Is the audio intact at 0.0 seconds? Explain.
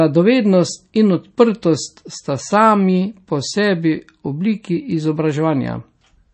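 No. At 0.0 seconds the speech already carries MP3 compression damage, and it runs through the whole clip. Nothing is present above 8.3 kHz, where the treble has been cut off. The damage is plainly audible: a watery, swirly texture, with weak detail flickering between frames. The likely cause is an encoder starved of bits, dropping the top band and zeroing quiet frequency lines. The sound fits a low bitrate of about 32 kbps.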